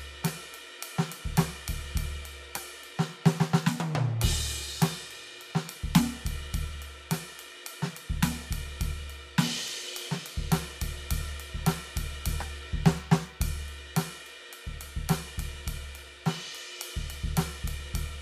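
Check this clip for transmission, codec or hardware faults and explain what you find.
Nothing turns up here: the music carries on steadily, with no transmission, codec or hardware trouble to point to anywhere along the way.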